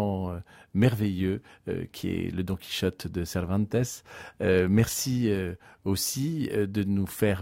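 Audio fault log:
No faults are audible anywhere in this speech clip.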